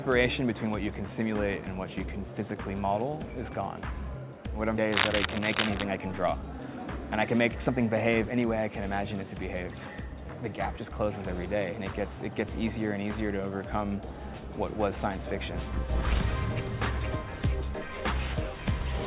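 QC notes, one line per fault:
4.92–5.84 s, cable scratch noise: a worn cable, connector or control being handled is the likely cause, its contact resistance jumping rapidly. This lays dense, irregular bursts of scratching and rustling over the audio for under a second, at roughly the same loudness as the sound itself.
5.98–6.68 s, jitter buffer speed-up: the receiver's buffer had built up more delay than its target, so it trimmed short pitch-period-sized pieces repeatedly, around 40 ms in total. Playback runs at 104% speed with pitch unchanged.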